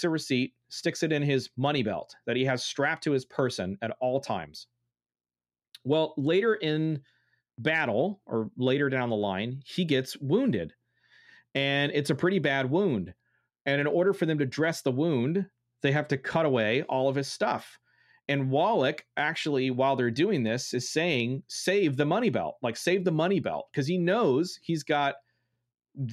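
No faults detected anywhere in the speech recording.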